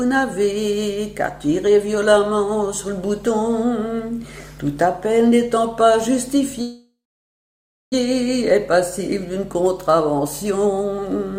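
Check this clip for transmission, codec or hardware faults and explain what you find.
There's one fault, a call audio freeze running from 6.61 s to 7.94 s. The sound stalls there, the last bit smears into a fading buzz or hiss, and then nearly a second of silence follows before the audio picks up exactly where it left off. The likely cause is packets held up in transit, so the jitter buffer drained and the receiver padded the wait. About 1.3 s was inserted, nothing was lost, and everything after it runs that much later.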